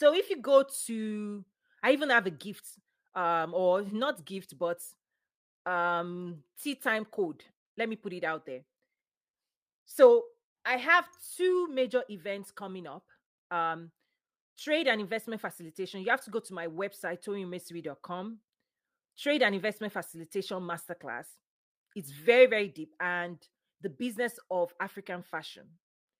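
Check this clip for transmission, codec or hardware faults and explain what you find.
No transmission, codec or hardware faults turn up in this clip.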